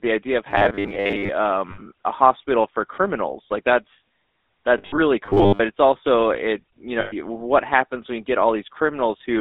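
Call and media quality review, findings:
GSM full-rate codec, throughout: buzzy, gravelly speech typical of a 13 kbps GSM full-rate path. Band limited to 300 Hz to 3.7 kHz. Spectrogram shows a hard ceiling near 3.7 kHz and a coarse, pulse-driven harmonic texture.

Robotic sound from repeated short buffers, 0.51 to 1.31 s after "idea of", and 5.26 to 5.61 s before "it's also it you": rigid metallic buzz at 100 Hz. Likely jitter-buffer underrun replaying a 10 ms slice for most of each span. Spectrogram shows flat, evenly spaced 100 Hz lines.

Lost GSM frames, 1.70 to 1.80 s before "a hospital for criminals" (80 ms), 4.78 to 5.00 s (140 ms scattered over 200 ms, runs under about 70 ms), 7.00 to 7.14 s (120 ms): rough metallic ring as concealment repeats the last good frame. The waveform shows held texture.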